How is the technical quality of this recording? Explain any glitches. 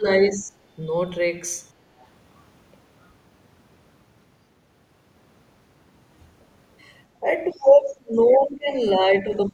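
The recording has two echo-control problems, both clustered around moments when the far end seems to be talking too.

Speech suppressed in double talk shows up at 0 to 0.56 s, 7.2 to 8.69 s, and 9.03 s to the end. The speech ducks, by roughly 30 dB at worst around 7.2 to 8.7 s, likely because the echo canceller couldn't tell the talker from loudspeaker echo and pulled everything down.

The other side's voice leaking through appears as brief, faint scraps at 1.99 to 2.05 s, 7.47 to 7.64 s and 8.29 to 8.37 s. They're very quiet early on, but the last is clearer, roughly 20 dB under the speech. That's likely leftover loudspeaker echo the canceller didn't fully remove.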